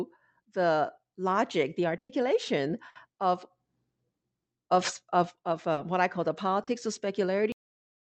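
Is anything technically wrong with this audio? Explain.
Yes. At 1.97 to 2.11 s and 2.89 to 2.97 s, the last sound is held and fades out before jumping ahead. This is a burst of packet loss, concealed for 120 ms and 60 ms, with the first dropping into about 100 ms of silence.

At 5.73 s and 6.63 s there are brief wobbles. These are short concealed packet losses, where the receiver continued the preceding sound for about 40 ms each.

At 7.52 s the audio stops abruptly mid-sound, with no decay. This is a cut-off end: the final buffers were never played. Throughout, the call codec limits the top end to about 8 kHz.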